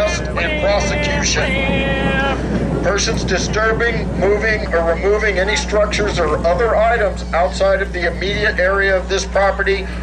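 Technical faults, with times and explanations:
Throughout, mains hum: a steady low 60 Hz drone with some low harmonics sits only a few decibels below the wanted sound and never lets up, because a ground loop or nearby transformer is coupling the power line straight into the signal path.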